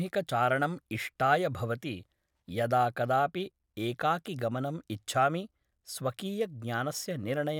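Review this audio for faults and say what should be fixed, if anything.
No faults found; nothing needs fixing.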